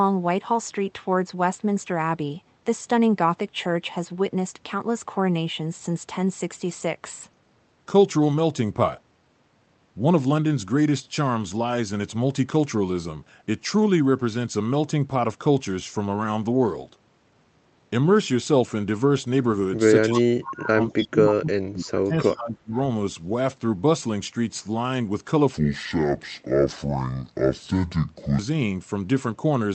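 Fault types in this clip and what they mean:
Speech suppressed in double talk: Between 20.05 and 22.76 s the speech dips and drops out in pieces, adding up to about two seconds, with the deepest cut around 35 dB down. This is likely an echo canceller that heard both ends active at once, could not tell the local talker apart from the loudspeaker return, and attenuated everything it picked up.
Echo leak: Three delayed copies of the speech come back at 20.9–21.07 s, 21.82–21.87 s and 22.2–22.36 s, each trailing the original by 291 ms. They sit roughly 15, 35 and 25 dB below the speech. The likely cause is a loudspeaker-side echo canceller that left part of its microphone pickup unremoved and sent it back.
Section at the wrong speed: From 25.54 to 28.39 s the audio plays at 0.594 times its proper rate. Because speed and pitch move together, the speech there turns slow and drops about ten semitones, sounding deep and dragged. 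The likely cause is that stretch being played or rendered against the wrong clock rate.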